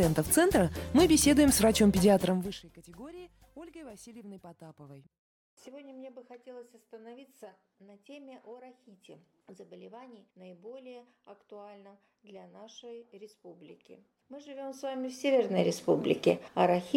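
No technical faults can be heard anywhere in the clip.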